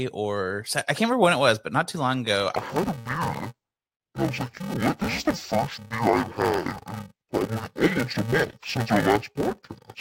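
Interleaved audio read as planar begins at 2.56 s, just after "not too long ago", and continues to the end of the clip. Samples that should alternate between left and right are being split by block, with the first half of each block taken as one channel and the second half as the other. Each half plays at half speed, so the overall pace holds. The blocks are short, about 2.9 ms, which fits a 128-sample block. Because of that, the speech turns dull and robotic with a buzz at 345 Hz rather than a clear drop of an octave.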